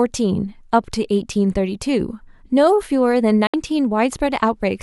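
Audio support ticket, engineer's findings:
Speech cuts to silence at 3.47 s via a very fast fade of about 3 ms and returns at 3.54 s, leaving a hole of roughly 70 ms. Digital broadcast dropout: the receiver muted on bad or missing frames, consistent with two lost frames. Audio from the gap is unrecoverable.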